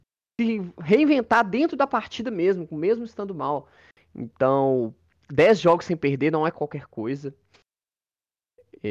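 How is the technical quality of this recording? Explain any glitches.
No technical faults are audible.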